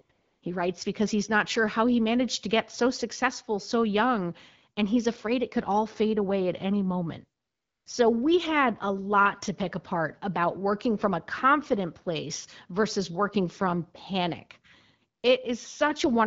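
AMR comfort noise: the phone treated the talker as silent and stopped sending speech frames at 0.01–0.09, 0.11–0.41, 7.41–7.85 and 15.19–15.23 s. The real background gives way to smooth synthetic hiss beneath the light wideband coding, which sounds like a 12.65 kbit/s rate.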